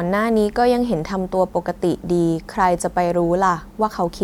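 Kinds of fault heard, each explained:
No technical faults detected.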